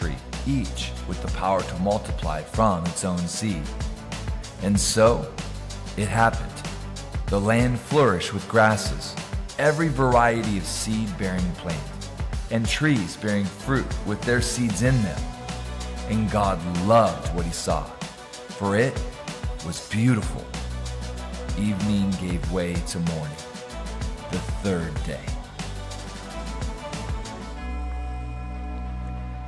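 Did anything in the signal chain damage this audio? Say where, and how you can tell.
No signal-chain damage heard.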